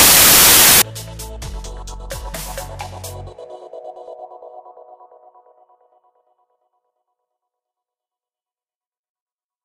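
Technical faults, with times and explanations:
0.0 to 0.82 s, samples built from the wrong bytes: the opening bursts into loud, harsh broadband noise. The reader's putting each sample's bytes together in the wrong order or alignment, so the jittery low bits end up driving the whole value.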